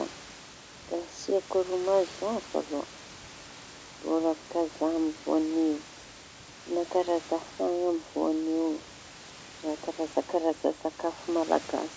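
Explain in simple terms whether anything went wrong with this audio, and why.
Nothing went wrong here; the speech has no faults.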